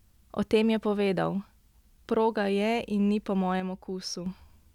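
From 3.60 to 4.26 s the speech abruptly falls about 6 dB, then recovers: likely one channel drops out before the mono sum.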